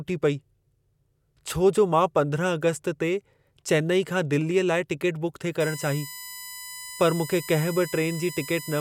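USB whine enters at 5.60 s and runs to the end: a fixed-pitch tone built on 1 kHz harmonics, strongest at 5 kHz, sitting roughly 15 dB below the speech. The bus's 1 ms frame current is leaking into the audio path through shared power or ground.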